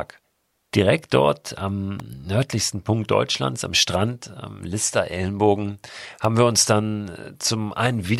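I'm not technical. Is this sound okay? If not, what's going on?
No. Two brief snaps, at 2.00 s and 6.25 s (just before "wir uns"), sit on top of the speech. This is an electrical switching spike, likely a nearby switch or motor arcing and the recording line catching that burst as a sharp click.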